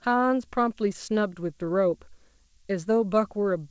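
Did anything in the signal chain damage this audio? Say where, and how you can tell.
Yes. The analogue power stage adds a switching supply whistle. A high, thin tone sits between 8.1 and 8.3 kHz for the whole clip. It runs about 25 dB below the speech. A switching regulator cycling at an audible rate would produce this.

Clock drift between sender and receiver affects the network and buffer stage. The sender's clock runs roughly 2% slow. The receiver's jitter buffer keeps draining, so it must stretch the audio to cover the gaps. The timing feels slightly loose throughout.

Repeated timing corrections appear in the buffer stage from 0.00 to 3.44 s. Playback runs at about 98% speed, and around 70 ms is added in total. The small insertions are unevenly spaced. If heard at all, they come across as faint hiccups and a slightly dragging tempo.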